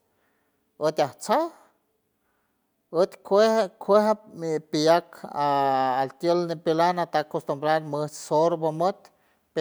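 No technical faults can be heard anywhere in the speech recording.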